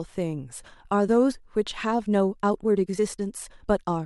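A speech clip with a time-stretched section running from 1.86 s to the end, where the pace abruptly jumps to about 1.36 times the earlier rate. That stretch sounds rushed, yet the pitch doesn't rise, which separates it from a plain playback speed-up or resampling error, where everything would shift upward together. The likely cause is software compressing that portion to fit a target length, dropping short slices to hold the pitch steady.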